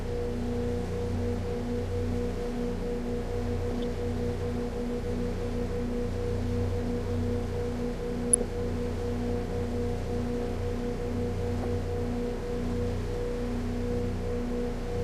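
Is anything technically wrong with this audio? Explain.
Yes. DAB burbling appears three times in this everyday sound recording: from 3.65 to 3.86 s, from 8.26 to 8.48 s, and briefly from 11.62 to 11.65 s. Under weak reception, a fraction of a percent of bits survive error correction wrongly, corrupting MP2 samples and scale factors, so individual sub-bands jump in level for up to a frame. It adds short blips of noise in single sub-bands over the sound. A spectrogram shows isolated rectangular blocks flaring in narrow bands, and the waveform shows short, irregular bursts.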